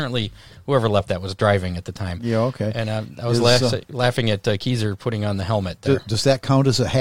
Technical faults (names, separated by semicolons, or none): none